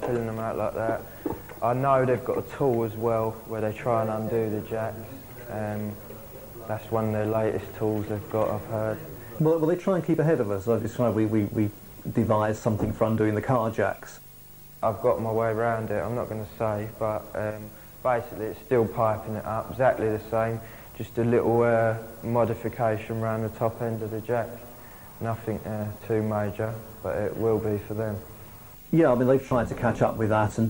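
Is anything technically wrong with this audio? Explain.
Yes. Throughout, quiet passages sound gritty and grainy, with distortion around 35 dB below the signal that follows the sound rather than sitting steady, likely from truncation to about 8 bits without dither. Dithered noise would stay constant instead.

A corrupt frame is concealed at 10.82–10.85 s and again at 29.49–29.52 s. The decoder detected damaged AAC frames and covered them, either by muting them or by substituting a scrambled copy of the previous spectrum. The first hit spans two frames (about 30 ms), the second one frame (about 26 ms).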